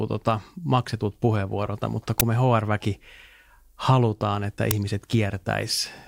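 An uninitialised buffer was played before audio filled it, so leftover memory came out as a short, loud crack at 2.20 s (fits 512 samples) and 4.71 s (fits 256 samples).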